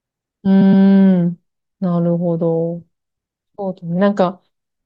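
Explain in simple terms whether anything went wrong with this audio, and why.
Repeated frames at 0.61 to 0.84 s: a short stretch of speech, about 0.12 s, plays twice more, stuttering and adding roughly 0.23 s.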